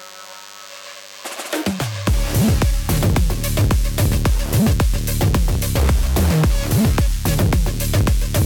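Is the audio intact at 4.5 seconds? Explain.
No. A steady, thin buzz rich in harmonics sits about 25 dB under the audio throughout, including 4.5 s. This is DECT cordless phone buzz: 100 Hz radio bursts rectified by the audio circuitry.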